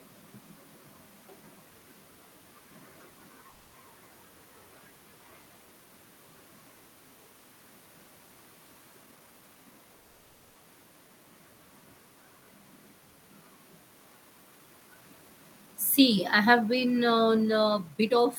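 Call audio freezes at 3.49 to 3.83 s and 9.97 to 10.57 s interrupt this speech clip: the last sound stretches into a fading buzz or hiss for about 240 ms and then 580 ms, and the speech resumes where it stopped, likely because delayed packets drained the jitter buffer. A jitter buffer speed-up from 14.21 to 18.26 s then plays the speech at 112% speed with unchanged pitch, as the receiver repeatedly trims pitch-period slices, about half a second in total, to shed excess buffered delay.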